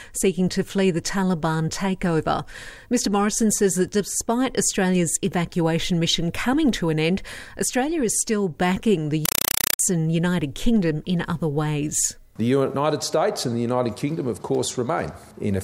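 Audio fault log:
9.25–9.79 s, compressed stream played as audio: undecoded Dolby Digital data becomes loud chattering static; waveform shows 4 ms bursts and flat gaps, 31.25 per second.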